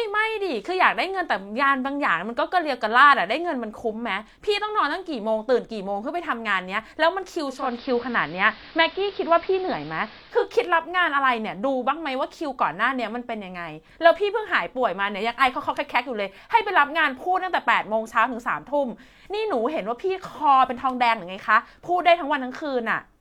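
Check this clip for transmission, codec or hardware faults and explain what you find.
There's one fault worth flagging. From 7.43 to 10.51 s the radio does a digital radio blend to analogue: it loses the digital stream and cross-fades over about 361 ms to the AM signal. The speech goes dull, shifts level by about 2 dB, and picks up hiss some way below the speech, then blends back.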